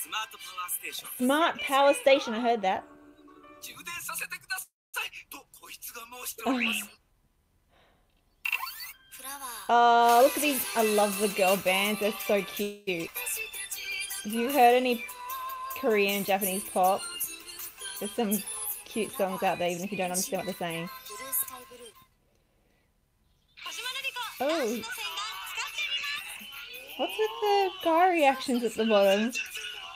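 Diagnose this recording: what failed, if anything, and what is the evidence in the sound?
Two call audio freezes stop the sound and fill the gap. From 4.62 to 4.96 s the last sound is stretched into a fading tail that goes silent for about 0.22 s. From 12.63 to 12.89 s a 0.24 s fill carries through without reaching silence. In both cases the sound resumes exactly where it left off. This is network trouble, likely delayed packets draining the jitter buffer. The receiver concealed the wait and fell about 0.3 s and 0.24 s further behind.

A jitter buffer speed-up makes the sound run faster without any change in pitch. From 10.16 to 12.36 s it runs at 107% of normal speed, trimming roughly 150 ms. From 19.65 to 27.20 s a gentler 104% removes roughly 300 ms. The jitter buffer was holding more than its target, for example after a burst of late packets. The receiver cut away short pitch-period pieces again and again to bring the delay back down.

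A skip ahead at 13.07–13.10 s makes the sound jump forward with almost no gap. Only about 8 ms bridges the join, and roughly 200 ms of material is missing across it. At this stage, late audio was already waiting in the jitter buffer, and a stretch was dropped outright rather than delayed. That took the buffer delay down by about 0.2 s in a single step.

A jitter buffer slow-down from 13.90 to 15.90 s draws the sound out at 95% speed, with the pitch unchanged. Over those two seconds about 112 ms is added, which gives sustained parts a slightly stretched, lingering quality. The jitter buffer was running low or had just raised its target delay. The receiver rebuilt its reserve by repeating single pitch periods and fragments of pauses many times over.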